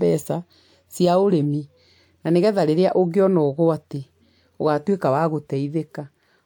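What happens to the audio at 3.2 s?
Nothing goes wrong at 3.2 s: the speech runs on cleanly through that moment, with no dropout, click, distortion or other fault.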